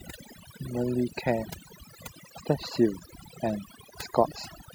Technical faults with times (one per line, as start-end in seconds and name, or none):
0.00-4.74 overdone noise removal